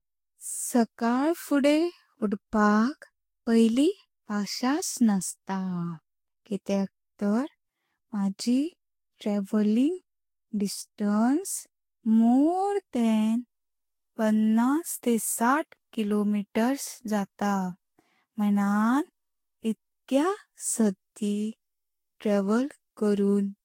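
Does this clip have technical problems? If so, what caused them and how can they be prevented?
Yes, generation loss throughout: likely about five lossy re-encodes, each adding fresh quantisation noise, leave the speech swirly and hollow, with blurred attacks and nothing above 16.6 kHz. Keep a lossless master and encode to the lossy format only once, at the final step.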